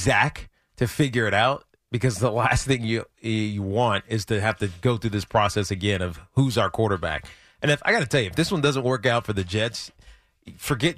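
Speech recording, no technical faults heard.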